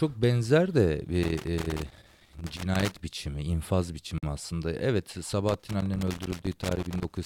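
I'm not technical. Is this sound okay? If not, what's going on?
No. In two places a cable plug or socket isn't making steady contact, a fault called loose connector crackle. A worn or dirty contact keeps connecting and disconnecting as it moves, so the speech gets chopped up. You hear it as uneven crackling and scratching from 1.23 to 3.0 seconds, starting just after "benzer de" and stopping right before "biçimi infaz", and again from 5.49 seconds to the end.

There is also a gap at a join of encoded pieces. The recording was saved as separate chunks that were stuck back together without trimming the bit of silence each chunk carries at its edges. Just after "biçimi infaz", at 4.18 seconds, the speech drops out for about 47 milliseconds, a short hole with blurred edges, and then carries on exactly where it left off.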